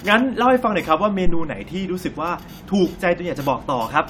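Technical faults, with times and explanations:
1.26–1.51 s, phantom power thump: a deep, heavy thud sounds, peaking at about −7 dBFS and dying away quickly, with a decay of around 55 ms. A supply was switched on or off on a live input, and that sudden voltage step ran through the coupling capacitors as a low-frequency pulse.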